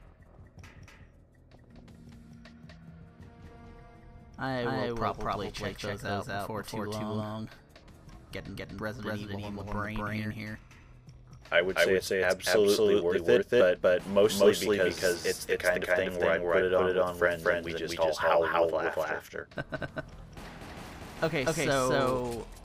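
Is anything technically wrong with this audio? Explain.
Yes. Throughout, every sound is followed by an identical, equally loud echo about a fifth of a second later: a doubled audio track, likely from a second, slower capture path mixed in.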